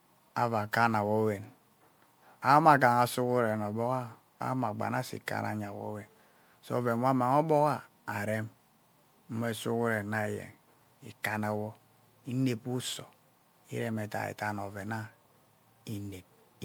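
Throughout the speech there is generation loss: a swirly, hollow sound with smeared attacks, worse than one MP3 pass at about 128 kbit/s would give. Likely cause: roughly five MP3 re-encodes, each on a shifted frame grid, compounding the artefacts. Nothing above 20.9 kHz.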